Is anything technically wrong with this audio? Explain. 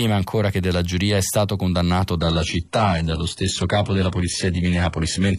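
Yes. An adaptive stream at a lower bitrate takes over at 2.19 s, right after "giuria è stato condannato", and lasts to the end. The connection slowed, so the player switched abruptly and without a gap to a much leaner encoding. The speech loses its natural treble, which turns synthetic and smeared, and codec artefacts rise, consistent with a drop from roughly 96 kbit/s AAC to HE-AAC near 12 kbit/s.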